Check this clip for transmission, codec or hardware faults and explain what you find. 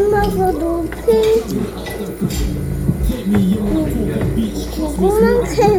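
No transmission, codec or hardware faults turned up on listening; nothing in the audio needs flagging.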